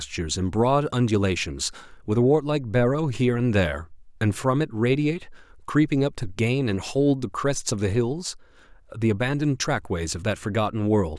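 Nothing stood out on listening to this speech recording.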